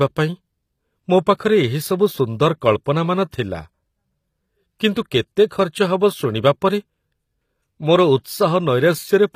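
Throughout the speech, the top octave sounds synthetic rather than missing. Sibilants come out gritty and metallic, and nothing reaches above about 15.5 kHz. The cause is likely HE-AAC compression at a bitrate around 24 kbps: only the lower band is truly coded, and the treble is rebuilt by copying lower bands upward under a coarse envelope. Plain low-pass filtering would sound dull. Here the brightness survives but its harmonics no longer line up with those below.

At 3.31 s a brief pre-echo appears. An 11 ms wash of hiss runs just ahead of a sharp onset, and the attack itself sounds softened. The codec spread quantisation noise across its whole transform block, so noise sized for the loud attack leaked into the quiet moment before it. A click or dropout would sit on the transient. This noise comes before it and blurs the edge.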